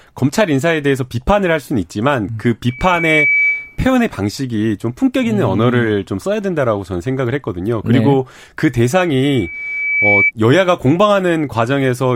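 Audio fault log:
2.68–3.79 s, loudspeaker feedback squeal: a single 2.3 kHz tone swells over about half a second to roughly speech level. Unlike a steady interference whistle, it grows by itself as the mic-to-speaker loop exceeds unity gain.
9.23–10.32 s, loudspeaker feedback squeal: the same 2.3 kHz ring returns, building more slowly over about a second and ending about 5 dB louder than the speech.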